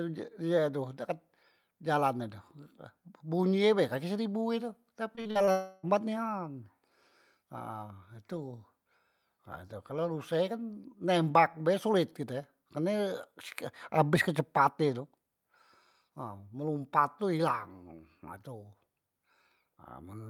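A speech recording in which the sound turns choppy and robotic from 5.15 to 5.49 s, a sign of repeated packet loss. Five short holes, the longest 41 ms, are each patched by stretching the preceding sound, so about 40% of that span is synthetic fill. Right after, from 5.51 to 5.85 s, the audio becomes one unbroken 320 ms smear with no gap into silence, which points to a long network dropout as the likely cause. Unlike the stutter before it, this is a single continuous extension rather than a series of brief patches.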